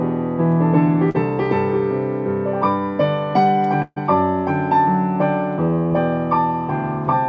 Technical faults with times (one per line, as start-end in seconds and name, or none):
1.10-1.16 short concealed packet loss
3.82-3.98 burst of packet loss
5.86-5.92 short concealed packet loss